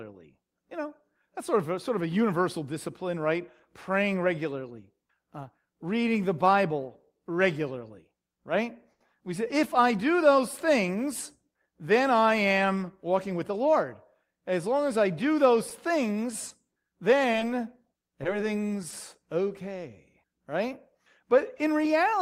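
Right after "regularly right", from 8.91 to 9.02 s, there's a short stall from a late packet. The next chunk of speech didn't arrive in time, so the jitter buffer ran dry and the receiver held the last sound for 90 ms until the packet showed up, then resumed exactly where it left off. Nothing is lost, but that sound drags, with a faint buzzy, slightly dipped quality, and everything after it sits 90 ms later.

Just after "things then I am", between 13.13 and 13.73 s, you get a jitter buffer speed-up. The buffer had built up more audio than it wanted, so the receiver trimmed out tiny pitch-period-sized slices, around 40 ms in total, to catch up. The speech plays about 6 percent fast at the same pitch, so that half-second feels a touch rushed rather than squeaky.

Then, following "as I do those", from 15.70 to 18.95 s, there are scattered short gaps. About seven packets went missing here and there, 60 ms of audio in all, and each hole, the longest only around 20 ms, was patched by extending the preceding sound. 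Only a few percent of that stretch is concealed, so it stays intelligible, but you can catch little ticks, smears and hiccups dotted through it.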